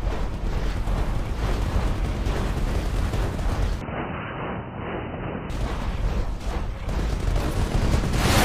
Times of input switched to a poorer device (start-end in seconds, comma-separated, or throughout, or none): 3.81-5.50